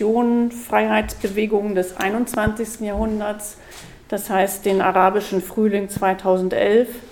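At 2.34 to 2.50 s a loud pop arrives as two sharp pops in quick succession, and at 5.97 to 5.99 s a single one follows, each roughly 10 dB above the surrounding audio, which continues underneath. The likely cause is a brief electrical transient, such as a switch or static discharge, added to the signal.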